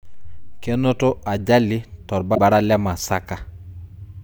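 At 2.31 s the compressed stream carries damaged data: a stretch of bytes no longer forms valid frames, so the decoder misreads what it finds, loses its place in the stream and has to hunt for the next good frame header before it can resume. For roughly 70 ms, until 2.39 s, the speech gives way to a chirp, squawk, click or short hole.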